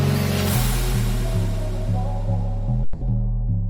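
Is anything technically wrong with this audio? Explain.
Yes. At 2.83 to 3.02 s there is a long network dropout, likely from a stall in delivery. About 180 ms of audio never arrived, and the receiver filled the gap by stretching the last sound into a fading buzz. Sound then resumes with that stretch missing.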